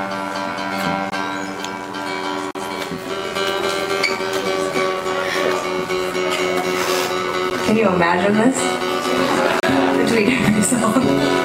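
A metallic buzz runs through the whole clip at around 100 Hz, about 6 dB deep. This is overlap-add ripple: frames overlap with uneven gain.

Short holes fall at 1.10 to 1.12 s (20 ms) and 2.51 to 2.55 s (40 ms), a tick at 7.5 s (10 ms), and a short hole at 9.60 to 9.63 s (30 ms). Each is a block of digital silence where the audio cut out with no fade.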